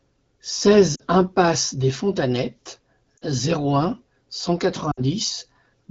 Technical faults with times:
0.95-1.03 lost AMR speech frames
3.17-3.23 lost AMR speech frames
4.91-5.03 lost AMR speech frames

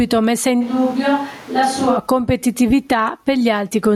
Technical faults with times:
0.00-3.96 gain pumping
0.63-1.96 switch to a distant microphone

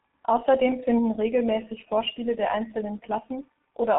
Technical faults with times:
0.00-3.98 G.723.1 codec

